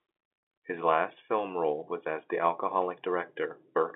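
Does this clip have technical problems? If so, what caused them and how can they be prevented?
No, this speech clip shows no technical problems.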